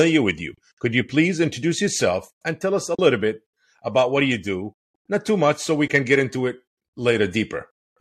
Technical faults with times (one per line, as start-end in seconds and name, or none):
2.95-2.99 AAC frame loss with muting
5.88-5.90 AAC frame loss with muting